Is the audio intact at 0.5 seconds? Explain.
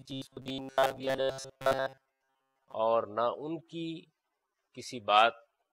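No. At 0.5 s the audio sits inside a stretch of robotic sound from repeated short buffers running from about 0.01 to 2.74 s. The likely cause is new audio arriving too seldom, so short chunks are replayed while real material is skipped, with most of the stretch made of repeats. The replays impose a rigid, metallic buzz at 134 Hz, which fits chunks of about 7.5 ms. Unlike a mains hum laid over intact sound, this buzz replaces the underlying audio.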